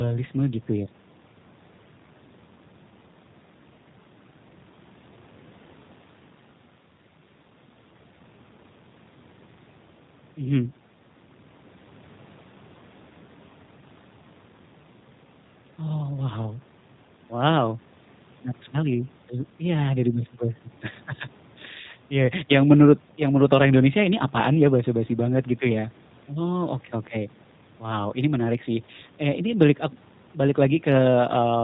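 From start to finish the speech sounds rough and faintly synthetic, with nothing audible above 4 kHz, so sibilants lose their bite. This is the G.729 codec at work, with its damage plainly audible. It discards the waveform and rebuilds each 10 ms frame from a vocal tract model, a pitch predictor and a few coded pulses, a sound that fits an 8 kbit/s call codec.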